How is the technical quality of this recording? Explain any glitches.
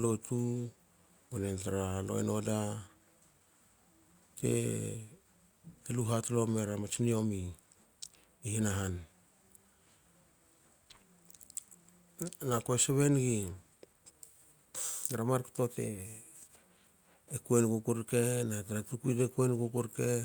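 The recording has a timing problem that runs through the whole clip: the audio keeps stumbling slightly, with small hiccups and an unsteady pace.

Clock drift between sender and receiver is present throughout. The sending side's clock runs roughly 4 percent fast, so audio arrives quicker than the receiver plays it out and its jitter buffer keeps filling. Small timing hiccups recur all through the clip. On a waveform, segment lengths look subtly irregular.

Repeated timing corrections follow from that drift, from 0.04 s to 20.15 s, compensating for the sender's clock running at 104 percent of the receiver's speed. To stay in step, the receiver keeps discarding short slivers of audio, always shortening and never padding, at uneven intervals. Each cut is small. A spectrogram shows thin vertical seams where harmonic traces jump abruptly.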